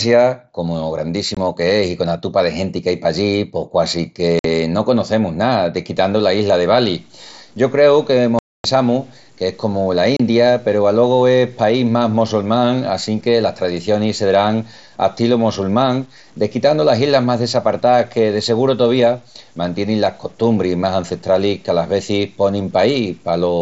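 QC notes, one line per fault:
1.35–1.37, 4.39–4.45, 8.39–8.65, 10.17–10.20 s: unconcealed Bluetooth headset packet loss. Holes of 22, 52, 255 and 30 ms (before "qu'es i cona tupa" and "no conocemus ná") fill with silence or an idle pattern, leaving abrupt edges.
5.97 s to end: low bit depth without dither. After "no conocemus ná", quiet passages turn gritty and sputter, with grain that follows the signal, likely from 8-bit truncation with noise roughly 35 dB down.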